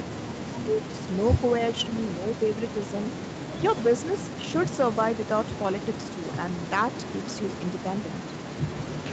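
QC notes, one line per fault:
0.09–0.84 s and 1.77–1.89 s, speech suppressed in double talk: the speech dips by up to about 25 dB over most of the first stretch and by about 10 dB in a brief dip near 1.8 s, likely an echo canceller ducking the talker during overlap. The waveform envelope looks carved out, and the spectrogram shows faded harmonics.
6.19–6.25 s, echo leak: a faint delayed copy of the speech, lagging 295 ms and about 30 dB below it, slips through, likely a residual the loudspeaker side's canceller missed. On the spectrogram it appears as a weak repeat of earlier harmonic traces. On the waveform it is barely visible.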